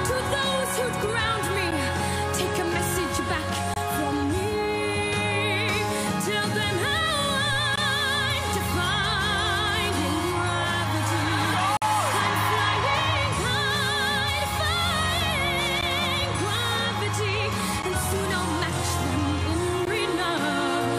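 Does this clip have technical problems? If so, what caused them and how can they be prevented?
Yes. There are gaps between stream segments at 1.71 s, 3.74 to 3.76 s, 7.76 s, 11.77 to 11.82 s, 15.81 s, 17.82 s and 19.85 s. Each is a hard-edged silent hole of about 10 to 49 ms. The timestamps of adjacent 2-second segments do not meet, so the player pads the space with silence. No audio is lost, but time is added. Prevent this by writing segment timestamps that abut exactly, with no rounding drift.

A DC step occurs at 7.53 s. The waveform's zero line suddenly jumps, and a low thump is heard. The sound carries on unchanged. The offset then decays away as if through a 5 Hz high-pass filter. This points to a converter recalibrating or an offset input being switched in. Prevent it by removing DC before the switch point and avoiding recalibration or input switching during recording.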